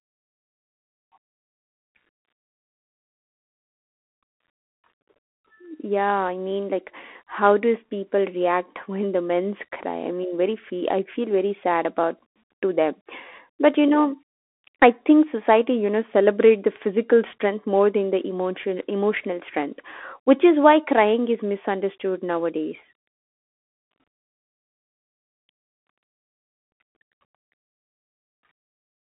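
Speech, heard throughout through a Bluetooth CVSD headset codec. The band runs only from about 250 Hz to 3.4 kHz. The one-bit delta coding, which fits a 64 kbps CVSD link, leaves a granular hiss underneath. S sounds turn scratchy, and loud high-pitched passages distort as the step size lags behind.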